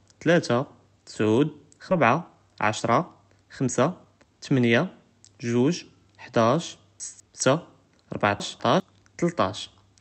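At 1.91 to 1.93 s, roughly a second of speech was dropped in a skip ahead, so playback jumps forward with almost no gap and the two sides butt together abruptly. From 2.05 to 4.34 s, the jitter buffer, still holding too much, trimmed repeated pitch-period slices totalling around a third of a second, a jitter buffer speed-up that makes the speech run at 112% speed at unchanged pitch and sound hurried. At 7.0 to 7.4 s, just after "גוג חדאש", and again at 8.4 to 8.8 s, a 200 ms chunk arrived one chunk late and played after its successor. These chunks out of order produce a jumbled moment at the hard joins. All of it passes through an Opus call path whose content stops near 8 kHz.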